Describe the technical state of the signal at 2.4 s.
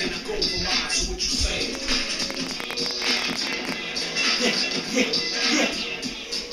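At 2.4 s a train of clicks is sounding, from 1.75 to 3.73 s. About 14 irregular pops per second tick through the sound, roughly 15 dB above it, likely from electrical interference.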